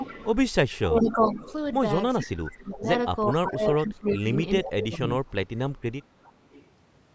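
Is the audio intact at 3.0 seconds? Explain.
No. At 3.0 seconds the speech is in a stretch of speech suppressed in double talk, running from 2.22 to 5.57 s. It dips in pieces, sinking as deep as roughly 25 dB. The likely cause is an echo canceller mistaking the talker for echo while both sides spoke.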